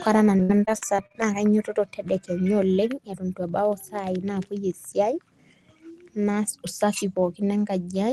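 From 0.37 to 1.16 s the speech breaks up with repeated packet loss (robotic sound): seven gaps, the longest 62 ms, each patched by stretching the last sound, so about a quarter of that span turns choppy. Unlike a single dropout, the holes recur in quick succession.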